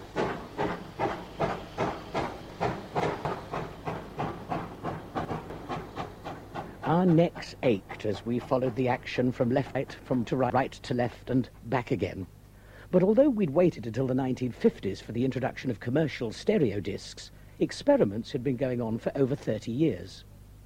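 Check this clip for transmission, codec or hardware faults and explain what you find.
There's one fault here, and it happens three times: chunks out of order, at 2.5 to 3.25 s, 4.75 to 5.5 s and 9.75 to 10.5 s. Each time a 250 ms block of audio turns up two blocks late, so it plays after the two that should follow it. Nothing goes missing, but the three-quarter-second stretch sounds jumbled, with three hard joins where the pieces butt together.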